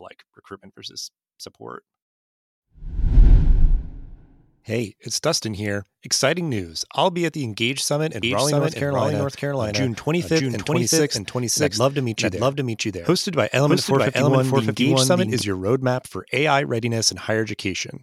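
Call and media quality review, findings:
Doubled audio track, 8.23–15.41 s: second full-band copy of speech trailing ~0.7 s, about equal level, abrupt onset before "your roadmap for"; likely duplicate capture path or misaligned edit.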